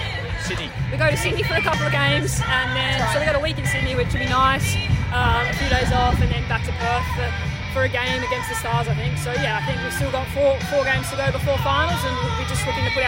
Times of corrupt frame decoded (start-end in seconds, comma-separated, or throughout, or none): 0.68